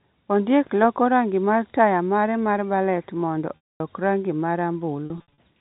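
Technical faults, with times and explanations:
3.57 to 3.80 s, packet loss with pitch repetition: a held, buzzy tone fading to silence, as about 240 ms of lost audio was bridged by repeating the last pitch period.
5.06 to 5.37 s, packet loss with pitch repetition: brief stuttering holds, where 180 ms of scattered losses, runs up to 60 ms, were patched by repeated pitch periods.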